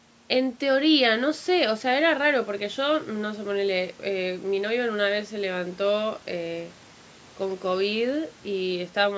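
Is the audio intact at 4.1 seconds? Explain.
Yes, the speech at 4.1 seconds is intact, with nothing but the expected band limit of the call microphone processing, which leaves no content above 8 kHz.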